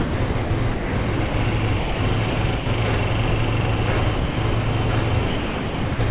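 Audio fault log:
0.0–1.34 s, 2.3–2.66 s and 5.27–5.99 s, sound chopped by the voice detector: the sound breaks up as parts of it, about 0.56 s, 0.15 s and 0.63 s in total, turn into synthetic hiss. The likely cause is a sender voice detector switching transmission on and off repeatedly.
1.79–2.0 s, 3.29–3.32 s and 4.16–4.37 s, sound dropped by the voice detector: the sound gives way to steady comfort noise for about 0.21 s, 0.03 s and 0.21 s, then returns. The likely cause is the detector mistaking quieter passages for background and pausing transmission until it triggered again.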